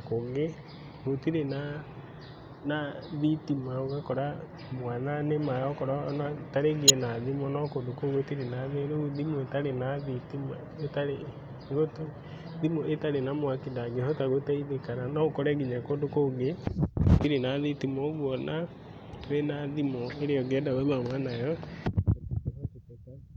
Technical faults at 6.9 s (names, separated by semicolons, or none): corrupt frame decoded